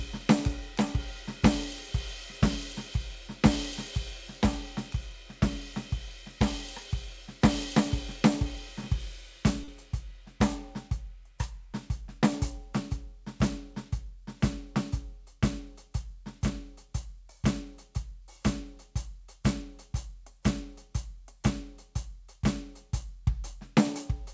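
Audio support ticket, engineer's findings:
Short concealed packet loss, 9.64–9.70 s in the music: quick smear where 40 ms never reached the decoder; concealment stretched the previous sound, then blended back. Band-limited at 8 kHz, fits G.722.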